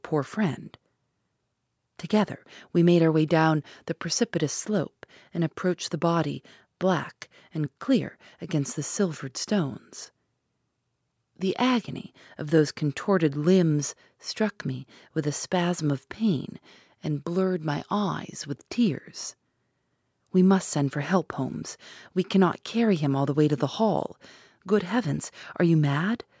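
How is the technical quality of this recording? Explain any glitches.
No technical faults can be heard anywhere in this speech recording.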